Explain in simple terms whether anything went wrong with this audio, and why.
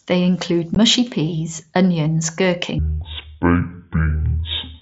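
Two things went wrong. First, unconcealed Bluetooth headset packet loss: at about 0.75 s, a tiny slice of audio travelling wirelessly between headset and phone never arrived, and the gap was left empty instead of being patched over. The loss lasts about 15 ms, which fits two missing packets. You hear it as a brief dropout with sharp edges that can make a small click in the speech.

Second, a section at the wrong speed: from 2.79 s to the end, the audio plays at half its proper speed, most likely because that part was played or edited against the wrong clock. Slowing it down also lowers the pitch, here by roughly ten semitones, so the speech suddenly turns deep, drawn-out and sluggish. The Bluetooth headset's mSBC codec adds only a light graininess on loud sounds.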